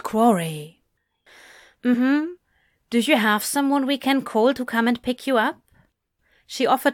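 Damaged data in a compressed stream, at 1.93 to 1.95 s: a brief disruption breaks into the speech. Corrupted bytes in that stretch made the decoder misread the affected frames and lose sync, so it searched for the next valid frame header.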